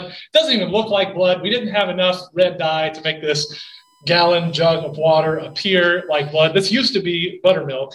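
From 3.28 s to 6.29 s a thin, steady tone at 1 kHz sits under the sound, fixed in pitch and faint, roughly 40 dB below the programme. This is USB whine. The bus draws current in bursts once every millisecond, and that 1 ms rhythm leaks into the audio path through shared power or ground wiring, appearing as a constant 1 kHz tone. It stops at 6.29 s.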